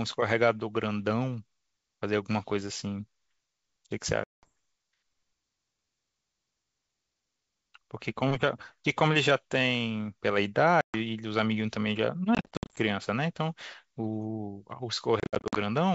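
Packet loss on an ADPCM call strikes at 4.24 s (about 190 ms gone), 10.81 s (130 ms), 12.35 to 12.80 s and 15.20 to 15.60 s (each about 230 ms, scattered in runs up to 60 ms). Each gap drops around fifteen to twenty packets, leaving the receiving decoder's predictor and step size out of step with the sender's. The sound cuts to hard-edged silence, then resumes slightly distorted before settling within tens of milliseconds. The G.722 wideband coding carries the speech cleanly, which fits its 64 kbit/s mode.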